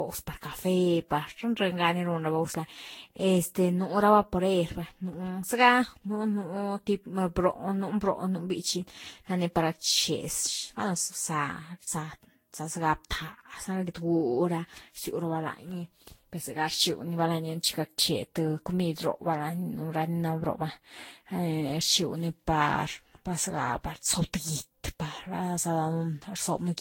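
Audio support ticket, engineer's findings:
Generation loss throughout: swirly, hollow speech, blurred attacks. Spectrogram shows a hard 16.6 kHz ceiling and patchy spectral holes. Likely around ten lossy re-encodes, each requantising afresh.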